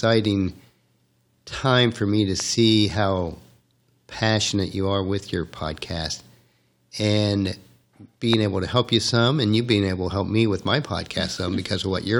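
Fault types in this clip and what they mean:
Loud pop: two sharp pops at 2.4 and 8.3 s jump well above the speech, likely a brief voltage spike from a switch or static.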